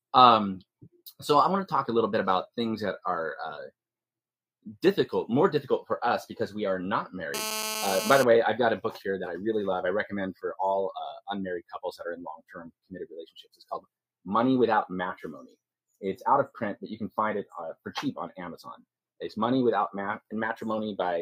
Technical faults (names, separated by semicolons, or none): GSM phone buzz; sound cut by the noise suppressor